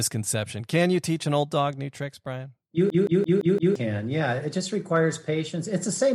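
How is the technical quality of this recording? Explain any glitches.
The speech recording has one clear glitch. From 2.90 to 3.76 s there is a system hang loop: the playback path froze while the hardware kept replaying its ring buffer, so one 171 ms slice, which fits an 8192-sample buffer, repeats five times at 5.86 Hz. That produces a machine-gun stutter, and about a second of speech is lost. Unlike a packet-loss stutter, every repeat is exactly identical.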